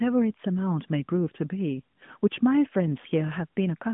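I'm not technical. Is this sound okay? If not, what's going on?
Yes, it's fine: this is speech carried over an ordinary narrowband mobile-phone line, so it has the familiar phone-call sound, and nothing in it is faulty.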